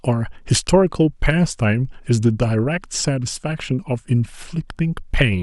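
No technical faults are audible anywhere in the recording.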